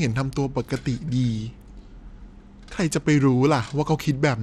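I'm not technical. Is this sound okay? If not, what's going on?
No. Throughout, the speech has a gritty, fizzy, flickering top end, likely from Bluetooth SBC compression. Simple muffling would dull the treble without that grit.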